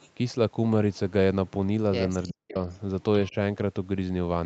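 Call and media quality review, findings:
Echo leak at 0.0–0.1 s, 2.23–2.33 s and 2.58–2.78 s: delayed copy of the talker, about 30, 15 and 35 dB below speech, lagging 388 ms. Likely far-end loudspeaker echo escaping the canceller. Spectrogram shows a weak repeat of the harmonic pattern offset 388 ms.

Speech suppressed in double talk at 2.33–2.57 s, deepest drop about 40 dB over roughly 200 ms, and at 3.3–3.35 s, about 10 dB. Likely the echo canceller attenuating the near talker during overlap. Waveform shows envelope notches, and the spectrogram shows energy gaps.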